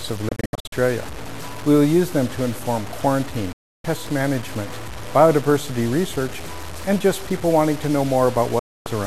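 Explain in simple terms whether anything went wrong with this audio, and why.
Yes, two things went wrong. Throughout, there is a grainy, gritty distortion that rises and falls with the sound itself. This is low bit depth without dither, likely from truncating the audio to very few levels.

A digital broadcast dropout happens three times: 0.29 to 0.73 s as several short holes, then 3.53 to 3.85 s and 8.59 to 8.86 s. Each time the sound fades quickly to silence and returns with material missing, unlike a crackly connection.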